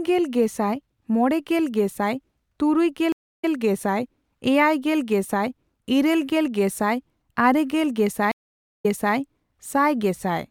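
Stream reconnects at 3.12–3.51 s and 8.32–9.16 s: the connection dropped, leaving gaps of 281 ms and 500 ms, flat lines in the waveform, then a fresh decoder replays speech 104 ms and 340 ms earlier.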